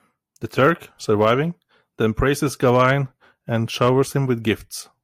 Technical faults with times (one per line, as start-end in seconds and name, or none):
0.59-0.69 hard clipping
1.21-1.31 hard clipping
2.64-2.90 hard clipping
3.82-3.89 hard clipping